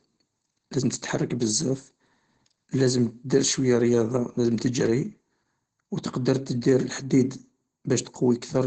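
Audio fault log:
Throughout: Opus voice compression. The speech is muffled and hoarse with a faintly robotic edge, and nothing survives above about 9.6 kHz. At around 12 kbps the SILK linear-prediction coder runs wideband with 20 ms frames, and it codes the excitation coarsely, which blurs the texture of the voice.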